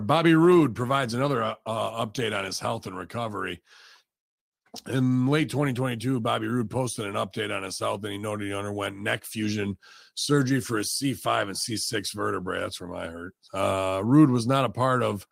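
Speech, with no technical faults to report.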